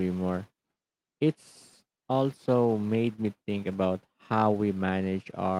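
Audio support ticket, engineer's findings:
Nothing stood out on listening; no findings to log for this speech recording.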